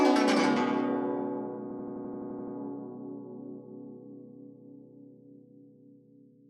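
A music clip where, from 1.71 to 2.56 s, a system hang loop repeats one 85 ms slice ten times, a machine-gun stutter at 11.7 Hz, which fits a 4096-sample ring buffer.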